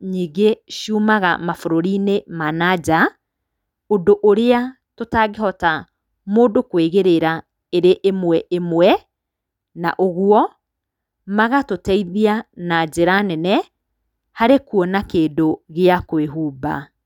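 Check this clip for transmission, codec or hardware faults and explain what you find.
Nothing wrong turns up anywhere in this speech recording. There is no fault here to describe.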